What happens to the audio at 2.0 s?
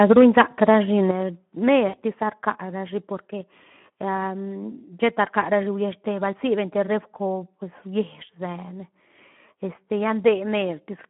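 Speech is being patched over after VoIP packet loss concealed by the speech codec, from 1.87 to 2.01 s. About 60 ms of audio went missing. The decoder stretched its last pitch and filter into a fading buzz or coloured noise.

The Speex codec is also at work here. Its starved excitation makes the speech hoarse and noisy, which fits a bitrate near 11 kbps. The band stops at 3.4 kHz.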